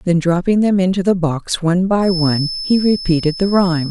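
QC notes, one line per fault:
1.99–3.9 s, feedback whistle: thin 5.2 kHz tone about 10 dB under the speech, likely a speaker-to-mic loop held at feedback's edge; single flat spectrogram line.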